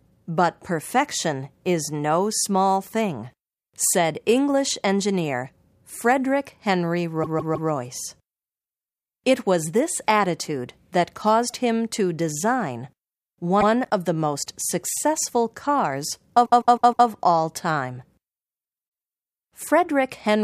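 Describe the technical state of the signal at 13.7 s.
Right at 13.6 s the speech stutters: a short slice of sound plays and then immediately plays again. This is repeated frames, spanning 13.60 to 13.68 s. A 78 ms block of compressed data was decoded twice, which points to a run of about three codec frames being written or sent a second time. The repeat adds 78 ms to the audio at that spot.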